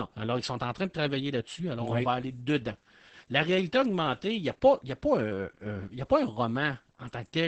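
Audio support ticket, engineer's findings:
Opus voice compression, whole clip: speech muffled, hoarse, faintly robotic. Spectrogram shows a hard ceiling near 8 kHz (wideband SILK) with smeared, grainy harmonics. Coarse excitation coding fits roughly a 10 kbps bitrate with 20 ms frames.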